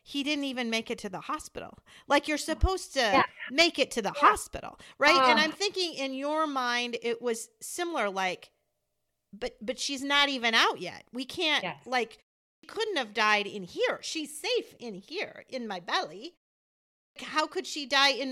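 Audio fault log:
12.45–12.63 s and 16.98–17.16 s, clipped start after a pause: after short pauses of 0.31 s and 0.69 s, the output wakes late and swallows about 180 ms. The first loss falls between "can't yes like" and "couldn't have died in". The waveform jumps abruptly from flat silence into speech.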